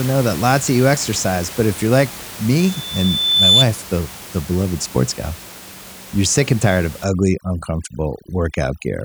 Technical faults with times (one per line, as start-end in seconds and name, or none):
2.58-3.66 loudspeaker feedback squeal
7.04-9.04 overdone noise removal